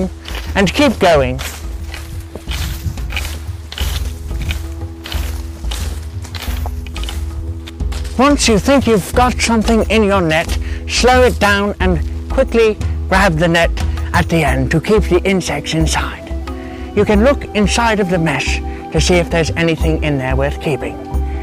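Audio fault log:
No fault is present anywhere in the clip. Nothing in the audio calls for an entry in this log.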